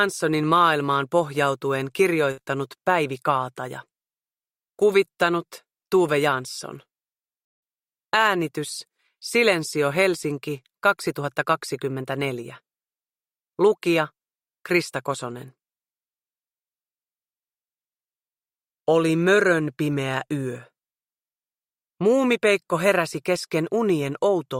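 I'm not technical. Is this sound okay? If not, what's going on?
No. There is one short glitch at about 2.31 to 2.39 seconds. It is a burst of packet loss. The audio travels in small chunks, and a few chunks in a row never arrived in time. The player covered the hole by stretching out the last bit of sound and letting it fade. That lasts roughly 60 milliseconds. Then the audio jumps ahead, and the part in between is simply missing.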